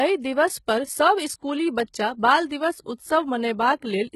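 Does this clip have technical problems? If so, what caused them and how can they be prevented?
Yes. Throughout the speech the treble sounds gritty and metallic, with s sounds lispy and nothing above about 11.8 kHz. This is likely HE-AAC compression at a very low rate, around 16 kbps, where spectral band replication copies lower bands upward instead of coding the real treble, so harmonics misalign. Encoding at a higher bitrate with plain AAC prevents this.

Pre-echo appears as a brief hiss smearing two attacks: from 1.84 to 1.88 s, right after "दिवस पर सब इस्कुली", spreading about 43 ms before the onset, and again at 2.49 s. The codec's block-wide quantisation noise leaks into the quiet moment before each sharp attack. Using a higher bitrate or an encoder with good block switching prevents it.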